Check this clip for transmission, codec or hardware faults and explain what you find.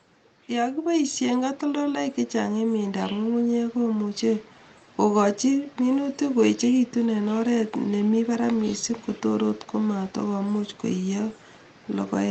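One fault stands out: automatic gain rising, from 0.47 s to about 4.54 s. The AGC judged the input too quiet and pushed its gain up by about 9 dB over those four seconds, so the speech and the background noise swell together in a slow, steady climb. The call path itself sounds like a normal codec link, with top end stopping around 8 kHz, which fits Opus at roughly 24 kbps.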